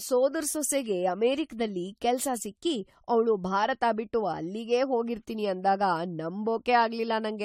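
Generation loss runs throughout the speech, from start to finish. The sound is swirly and hollow, with smeared, blurred consonant attacks and nothing above 16.5 kHz. The likely cause is repeated lossy coding: the audio seems to have been decoded and re-encoded about four times, in a way that fits AAC-LC at 64 kbit/s. Each pass quantises on a shifted frame grid, so the noise and spectral gaps pile up beyond what that bitrate would cause in a single pass.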